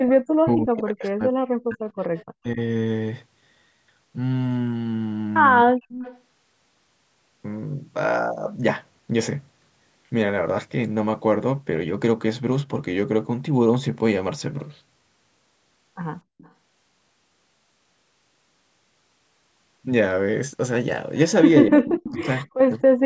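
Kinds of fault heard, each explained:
Echo leak: A delayed copy of the far side returns about 253 ms late, the mark of a loudspeaker echo that the echo canceller likely failed to fully remove. It appears at 0.0 to 0.1 s, 1.9 to 2.24 s, 5.93 to 6.2 s and 16.38 to 16.52 s. The first and third bursts are fairly strong, about 15 dB below the speech. The second is faint, around 30 dB down. The last is fainter still, near 35 dB down.
Speech suppressed in double talk: The talker's voice drops out sharply, by as much as roughly 40 dB, in four stretches. These come at 0.42 to 1.86 s, 2.38 to 2.58 s, 5.64 to 5.96 s and 21.67 to 22.73 s. The longest lose about a second and a half and about a second of speech. The shorter ones are brief chops. Both sides were likely talking at once, and the canceller turned everything down.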